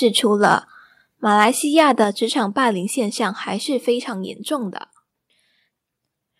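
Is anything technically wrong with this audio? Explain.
Yes. In this speech clip, the loudest moments crack and splinter, at 0.43 to 0.54 s, 1.41 to 1.44 s and 1.78 to 2.02 s, with a harsh, gritty edge on those peaks. This is microphone overload. The input is likely set too high, so the waveform runs past the converter's ceiling, by about 4, 2 and 3 dB respectively, and the tops are sliced flat. Only a small share of samples is cut, a few percent at most, but enough to be audible.

The level also drops suddenly twice, at 1.02 s and again at 2.04 s, the second right after a distorted stretch, with voice and background falling together. This is a microphone volume stepped down: the call software likely detected the overload and cut the device's input gain in a single step, by about 3 dB and then about 4 dB, so each drop lands as an abrupt, uniform step rather than a fade.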